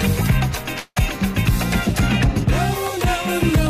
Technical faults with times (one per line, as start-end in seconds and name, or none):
0.79-0.97 call audio freeze